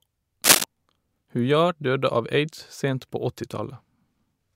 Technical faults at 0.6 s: cable scratch noise

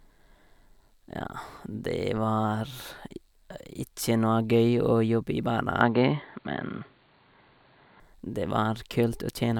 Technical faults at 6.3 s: input switched to a poorer device

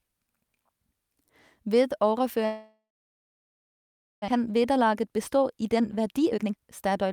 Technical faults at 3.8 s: long network dropout

